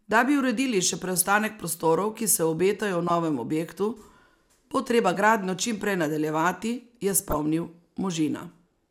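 DAB burbling at 1.16 to 1.25 s, 3.08 to 3.17 s and 7.12 to 7.35 s. Bit errors corrupt sub-band samples, giving short blips of noise in single sub-bands.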